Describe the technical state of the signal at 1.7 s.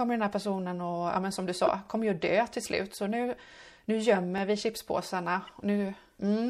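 At 1.7 s the speech carries a corrupt frame decoded, running from 1.66 to 1.69 s. Bits inside a few compressed frames were flipped, and the decoder played them anyway, so misread gains and codes placed energy at the wrong frequencies for just those frames. The result is a short chirp or squeak. Unlike a dropout or click, it adds tonal or noisy content rather than silence or a single impulse.

Underneath, the whole passage has a watery, swirling quality, heard as MP3 compression. The likely cause is a low bitrate, which fits something near 64 kbps. Short of bits, the encoder zeroes weak spectral lines that switch on and off between frames. Unlike the one-off corruption burst, this smearing is continuous and follows the speech rather than interrupting it.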